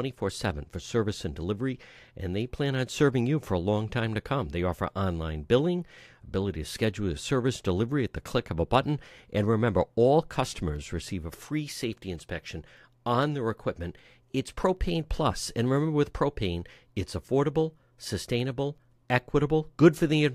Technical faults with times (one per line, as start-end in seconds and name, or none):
0.75-18.78 periodic USB or driver dropouts